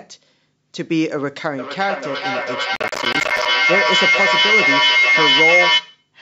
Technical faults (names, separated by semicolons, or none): feedback howl; processor overload crackle